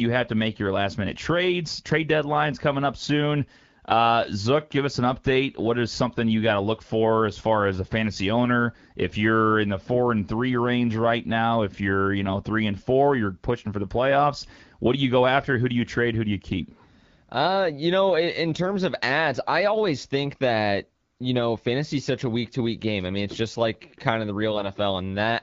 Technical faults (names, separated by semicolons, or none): AMR bit errors